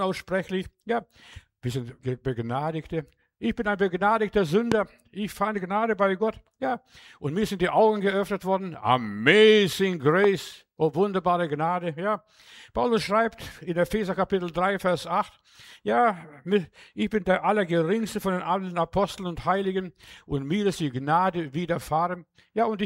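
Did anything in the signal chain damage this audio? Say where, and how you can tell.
Yes. Two loud pops, at 4.72 to 4.74 s and 10.24 to 10.26 s, peaking around 20 and 15 dB above the sound. Likely analogue wiring: a voltage spike from a plug or switch.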